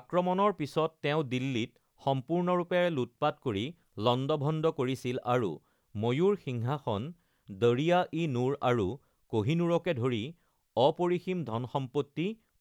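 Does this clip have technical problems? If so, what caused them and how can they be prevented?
No, there are no technical faults to report in this speech clip, so nothing needs preventing.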